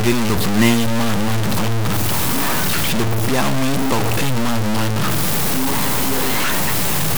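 Speech with gritty, grainy distortion throughout that rises and falls with the voice, roughly as loud as the speech, while quiet stretches drop to silence or sputter between steps. This is likely low bit depth without dither, pointing to truncation to about 3 bits. The waveform shows coarse flat steps, and the spectrogram shows broadband noise tracking every syllable.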